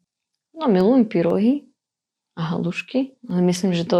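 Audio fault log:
0.81–3.30 s, periodic USB or driver dropouts: across this span of speech the signal drops out every 0.5 s, roughly seven times, each gap a tiny sliver of about half a millisecond filled with silence. A blocked bus or driver stalls delivery at a fixed interval, so each brief loss lands as a regular tick during sound. On the waveform these show as evenly spaced notches of near-silence; the spectrogram shows thin vertical broadband lines at matching spacing.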